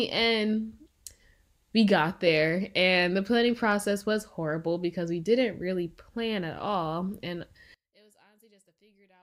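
Speech, which from 7.74 s to the end at 9.23 s falls by about 35 dB to a faint remnant. The likely cause is one channel inverted: with one side's polarity reversed, the shared, centred speech cancels when the channels are summed to mono. The waveform collapses to a near-flat line, and the spectrogram goes almost blank.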